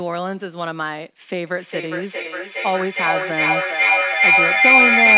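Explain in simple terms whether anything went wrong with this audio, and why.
From 1.47 s to the end of the clip, a feedback howl takes over. Two devices on the same call in one room keep re-amplifying each other's sound, looping it back roughly every 0.4 seconds, so a whistle of about 2 kHz builds up and becomes louder than the speech.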